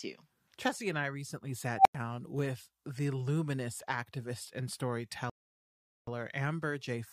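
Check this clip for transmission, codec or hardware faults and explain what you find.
Two faults are audible in this speech clip: one from a processing filter and one from playback delivery.

Unstable filter, 1.76 to 1.95 s, right after "and I recently": a recursive filter has gone unstable, so its output feeds back and grows without bound. A tone around 700 Hz swells over about 93 ms, then cuts to roughly 95 ms of silence when the overflowing values fail and the filter resets, before "with the luminous activist".

Rebuffering stall, 5.30 to 6.07 s, just after "the luminous activist and": the player exhausted its downloaded audio and paused until more data arrived. The sound drops to silence for about 777 ms, then picks up exactly where it stopped, so nothing is lost but time is added.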